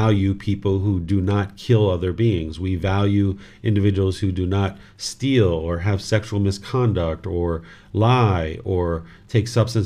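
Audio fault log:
No fault can be heard anywhere in this speech clip. Nothing in it calls for a timed entry.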